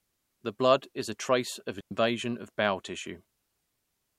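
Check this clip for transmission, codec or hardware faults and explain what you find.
One fault is present: a digital wireless dropout from 1.80 to 1.91 s. The receiver, losing too much data, mutes for about 107 ms, leaving a clean near-silent hole without noise bursts.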